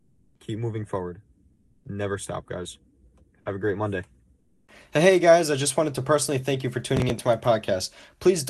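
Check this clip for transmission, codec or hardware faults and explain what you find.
Two faults occur in this speech clip, carried over a call codec whose spectrum stops near 12 kHz.

Comfort noise in place of the background occurs at 0.00–0.35 s, 1.55–1.83 s and 4.39–4.67 s. Smooth, featureless hiss about 2, 2 and 5 dB quieter replaces the real background, likely discontinuous transmission. A spectrogram shows uniform, detail-free texture there.

Processor overload crackle runs from 6.97 to 7.19 s. Roughly five deadlines are missed, each filled with stale audio about 10 ms long, producing gritty tearing. The waveform shows repeated hard-edged fragments, and the spectrogram shows vertical broadband streaks.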